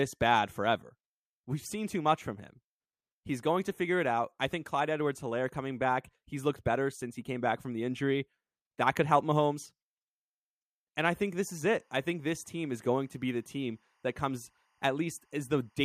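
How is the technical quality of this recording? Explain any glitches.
The speech carries one clear fault: timecode bleed from 11.50 s to the end of the clip at 15.84 s. Linear timecode from a neighbouring track or cable has leaked into the audio path. Its square wave flips between pitches near 1 and 2 kHz, giving a faint chirping warble behind the speech, very low at roughly 45 dB down. Its rhythm fits 24 frames per second, and that switching between two pitches sets it apart from a steady single-pitch whine or hum.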